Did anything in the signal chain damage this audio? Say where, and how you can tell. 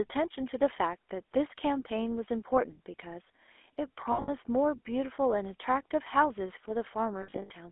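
Yes. Throughout, the speech is buzzy and gravelly and confined to roughly 300 Hz to 3.4 kHz: the codec stage, consistent with the 13 kbps GSM full-rate codec, which rebuilds the voice from a coarse pulse excitation.

At 4.12 to 4.30 s and 7.22 to 7.51 s, the sound freezes into a rough, metallic ring: lost GSM frames on the network, each gap concealed by repeating the last good frame.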